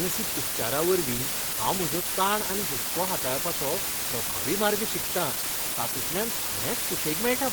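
From the first moment to the end, the speech sits under a heavy, even hiss. That's low bit depth with dither: the signal is carried on only 3 bits, and dither noise is added before each sample is rounded, so the rounding error becomes steady white noise instead of crunchy distortion. With so few levels, the hiss comes out at roughly the same level as the speech, so the two compete the whole way through rather than the noise sitting politely underneath.

Also running the full length is a rough, grainy texture that points to Opus compression, likely at a low rate in the region of 16 kbps, in the codec's hybrid mode that mixes its speech and music coders. The damage is plainly audible: the voice sounds hoarse and textured, and the encoder patches starved bands with folded or noise-like fill instead of leaving gaps. The audio still reaches up to about 20 kHz, so the problem is grit and a muffled, hoarse quality rather than a band-limited sound.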